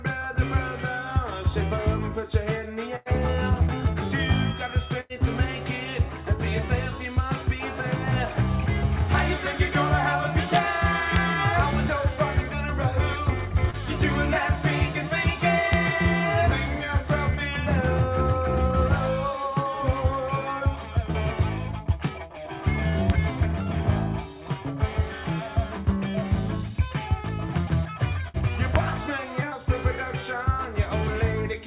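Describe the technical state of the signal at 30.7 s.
At 30.7 s the signal is intact, with no dropout, glitch or distortion, only the narrowband character of the call path, which has nothing above 4 kHz and fits a G.711 mu-law telephone codec.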